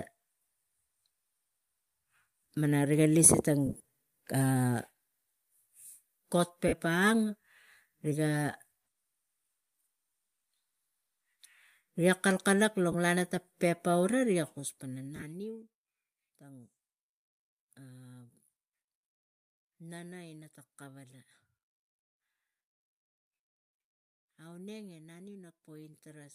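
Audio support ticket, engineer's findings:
Lost LE Audio frames at 3.66–3.80 s (about 100 ms of gaps across 180 ms), 6.68–6.73, 12.92–12.94 and 15.16–15.23 s. Speech smears into noisy hiss, likely from LC3 decoder concealment. Spectrogram shows blurred, grainy patches where the harmonics break up.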